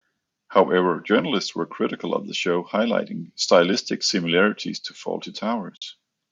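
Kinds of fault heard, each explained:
AAC frame loss with muting: at 5.77 to 5.82 s the speech drops into a soft-edged hole, about 50 ms of missing audio, which fits five lost frames. The decoder zeroed their spectrum, and overlapping windows fade the sound out and back in.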